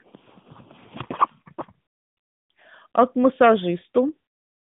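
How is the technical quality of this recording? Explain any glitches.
The recording has no glitches, carrying the speech over a narrowband mobile link that fits AMR-NB at around 12.2 kbps, which confines it to a telephone band of roughly 150 Hz to 3.6 kHz.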